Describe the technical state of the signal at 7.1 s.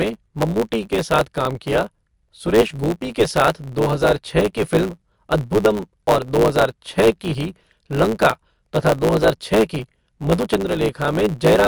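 At 7.1 s the speech carries two faults, both present across the whole clip. The first is likely MP3 compression. The codec damage is plainly audible. Weak frequency components drop in and out between frames, giving a watery, swirling texture. S sounds turn metallic, and onsets smear. This points to a low bitrate, 53 kbps.

The second is a block size mismatch (truncated). One stage hands over longer blocks than the next one reads. The tail of each block is discarded. This chopping produces a steady buzz at 109 Hz, the block rate. Because material is lost, the speech runs 1.09 times fast. The timbre stays.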